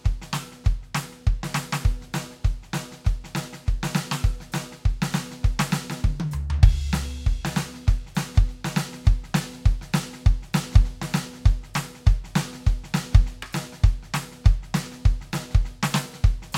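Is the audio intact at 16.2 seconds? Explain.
Yes, the music plays through 16.2 seconds without any audible dropout, click, distortion or other fault at that moment.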